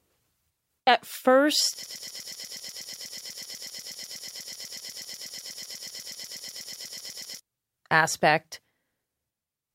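From 1.83 s to 7.40 s the speech stutters on one 0.12 s fragment, repeated 45 times: a broken-record loop, likely a stalled player resending its last buffer.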